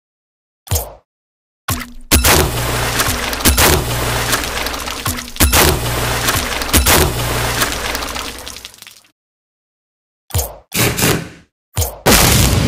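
Integer overflow runs throughout: with about 7 dB too much gain, the loudest peaks wrap to the opposite sign, giving harsh cracks on roughly one percent of samples.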